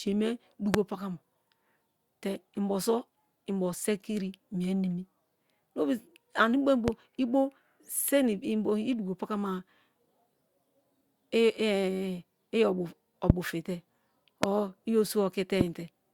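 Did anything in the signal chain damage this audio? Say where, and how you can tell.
Yes. Loud pops occur at 0.74, 6.88, 13.30, 14.43 and 15.61 s. Each is one sharp burst of about 23 ms, about 20 dB above the speech, which carries on beneath. The likely cause is a voltage spike in the analogue wiring, such as a faulty plug.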